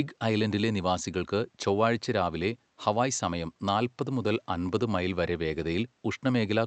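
Nothing goes wrong anywhere in this speech clip; it simply carries the gentle coding texture and the top end that stops around 8 kHz that you'd expect from an Opus call path.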